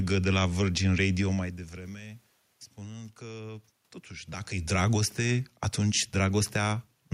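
No technical faults are audible.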